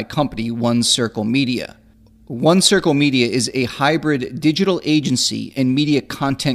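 A short speech recording with no technical fault audible anywhere in it. There is nothing here that needs a time stamp or a cause.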